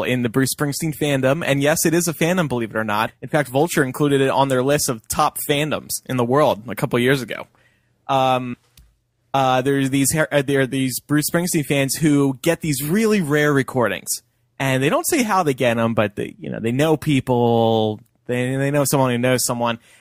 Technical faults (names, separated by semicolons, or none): compressed frames skipped